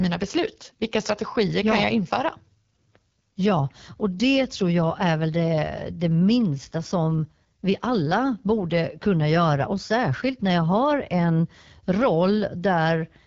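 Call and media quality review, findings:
Rough, raspy speech throughout, with no content above about 7.3 kHz. Top band thin and hissy rather than crisp. Component: AMR wideband (HD Voice) codec on the call leg, at a low rate that points to 8.85 kbit/s. Mechanism: pulse-driven vocal tract model coding only to 6.4 kHz, with noise filling the band above. Too few bits for clean excitation, hence the grit.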